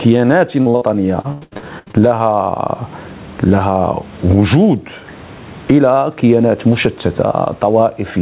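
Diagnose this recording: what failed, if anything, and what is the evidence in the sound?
Gain pumping runs throughout: background noise swells between loud sounds and ducks by around 20 dB under each. This is likely a fast limiter acting on excessive microphone gain.

Short concealed packet loss at 0.62 to 0.68 s and 0.70 to 0.76 s: network drops of about 40 ms each, patched by extending the preceding sound, giving brief smears.

Burst of packet loss at 0.76 to 0.83 s: about 60 ms went missing on the network. The receiver held and faded the last sound, then resumed later.

Repeated packet loss (robotic sound) from 1.21 to 2.03 s: ten gaps, the longest 94 ms, were concealed, covering nearly half the stretch. The result is choppy sound with pieces missing.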